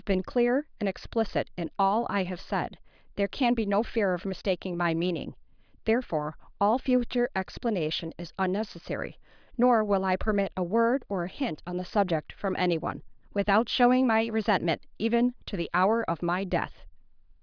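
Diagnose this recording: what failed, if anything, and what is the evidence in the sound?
Nothing failed; no fault is audible in this recording.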